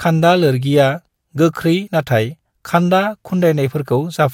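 At 1.86 s the speech lurches slightly forward, as if a sliver of sound went missing. This is compressed frames skipped: about one frame of the encoded audio was never played, either missing from the file or rejected by the decoder as damaged, so playback jumps ahead by around 20 ms.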